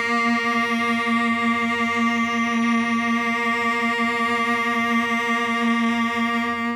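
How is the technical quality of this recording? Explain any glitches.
The music is doubled all the way through: a second copy of the whole track trails the first by roughly a fifth of a second, at about the same level. That's a doubled audio track, likely from the same signal getting captured twice, once through a slower path. Because the copy is full-band, dry and just as loud, every attack gets an immediate second hit, so rhythms smear into a flammy, stuttering echo with no room tail behind it.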